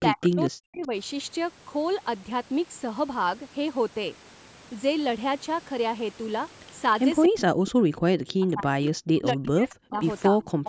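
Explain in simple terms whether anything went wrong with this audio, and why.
The speech keeps dropping away, sometimes nearly to silence, from 0.0 to 0.91 s, 7.28 to 7.76 s, 7.92 to 7.97 s, 8.15 to 10.01 s and 10.29 to 10.65 s. This is speech suppressed in double talk: both sides likely spoke at once, and the echo canceller turned this talker down.

A faint, delayed copy of the speech, trailing by about 0.24 s, shows up briefly at 0.21 to 0.28 s and again at 10.64 to 10.69 s. This is echo leak: the far end's loudspeaker sound likely reached its microphone and was not fully cancelled.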